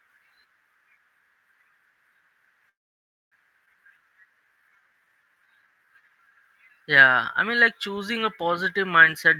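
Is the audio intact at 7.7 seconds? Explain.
Yes, the audio is intact at 7.7 seconds, with no audible fault at that moment.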